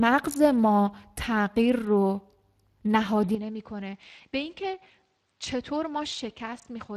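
A speech clip carries plainly audible Speex codec damage throughout. The voice sounds noisy and hoarse, as the CELP coder runs short of bits for the excitation. Nothing reaches above 15 kHz. The roughness points to a middling bitrate of around 22 kbps. From 3.35 s to the end, the sound turns duller and drops about 10 dB in level with no gap. The band now stops at 8.7 kHz, and a faint new noise floor appears well below the speech. This is likely an input switched to a poorer device.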